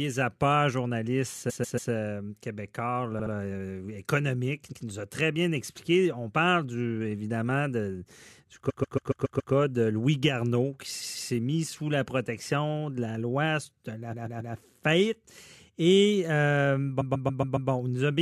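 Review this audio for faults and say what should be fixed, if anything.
Repeated frames make the speech stutter at 1.49, 3.18, 4.72, 8.69, 11.01, 14.12 and 17.00 s. A short block of compressed audio plays again up to six extra times, adding as much as 0.84 s per event. Most repeated blocks are 0.14 s long, with 0.07 s at 3.18 s and 0.12 s at 4.72 s. On a waveform the identical segments sit side by side like tiles. A spectrogram shows the same pattern copied repeatedly. To fix this, check the encoder output or transport layer so that frames are not rewritten or resent after a write retry.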